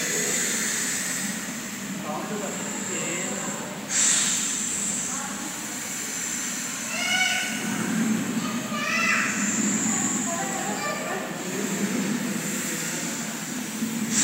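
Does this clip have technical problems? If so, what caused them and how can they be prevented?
No, this clip has no technical problems, so there is nothing to trace back to a cause or to prevent.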